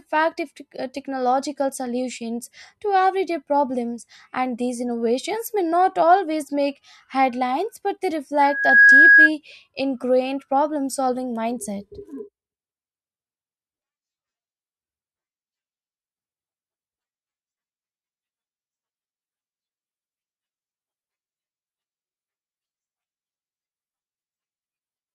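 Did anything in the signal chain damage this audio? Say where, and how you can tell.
Yes. A loudspeaker feedback squeal in the acoustic and analogue loop runs from 8.39 to 9.30 s, between "make headlines but they" and "ingrained problem solving mindset". A 1.6 kHz tone swells within about 0.4 s to roughly 10 dB above the speech. The microphone is hearing its own loudspeaker, and the loop gain at that frequency exceeds one.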